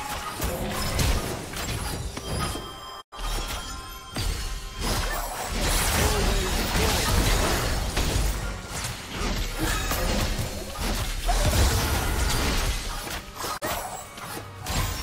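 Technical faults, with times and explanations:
3.00–3.14 s and 13.56–13.64 s: digital broadcast dropout. The sound fades out within 20 ms and goes silent. The receiver muted on bad frames, so that programme is lost.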